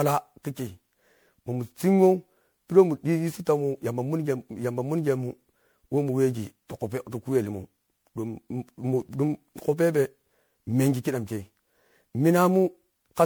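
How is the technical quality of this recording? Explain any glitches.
The recording is degraded throughout, with one persistent fault.

Generation loss, across the whole clip: the speech sounds swirly, smeared and hollow, with blurred attacks and no content above 20.9 kHz. It likely comes from about ten repeated MP3 passes at a rate fitting 128 kbit/s. Each pass re-quantised on a shifted frame grid, piling up noise and spectral holes.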